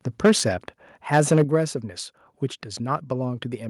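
From 0.24 to 0.4 s, microphone overload, likely from an over-high input volume, pushes peaks about 6 dB past the converter's limit, flattening a fair share of them into a harsh crackle. At 0.25 s the microphone volume is likely stepped down by about 2 dB, a small sudden drop in speech and background alike. From 1.14 to 1.55 s the overload returns, likely from the same cause, clipping fewer peaks but still rasping. At 1.44 s a second step down of about 7 dB, likely made by the call software, cuts the level abruptly.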